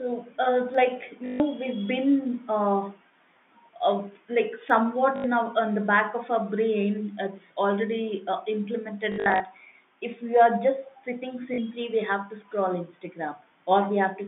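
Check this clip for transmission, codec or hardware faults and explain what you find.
Two kinds of fault turn up in the speech: two isolated clicks and four bursts of robotic stutter.

Dropped samples: Single sharp ticks at 0.75 s and 4.70 s, each a thin vertical line in the spectrum with nothing audibly missing around it. The likely cause is a tiny gap in the sample stream, a fraction of a millisecond, so the waveform jumps straight from one value to a later one. That discontinuity produces a click rather than any loss of sound.

Packet loss with last packet repeated: A buzzy, mechanical stutter from 1.26 to 1.40 s (140 ms), 5.16 to 5.24 s (80 ms), and 11.54 to 11.58 s (40 ms). From 9.12 to 9.40 s it is patchier, with about 200 ms of loss scattered over 280 ms and the longest unbroken run 60 ms. When packets failed to arrive, the receiver kept replaying the last good one. The repeats seldom line up with the pitch of the voice. 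The buzz rate is consistent with 20 ms packets, which makes the 1.26 s burst about seven lost packets. On this G.711 telephone line the speech is limited to roughly 150 Hz to 3.6 kHz, and the stutter sits within that narrow band.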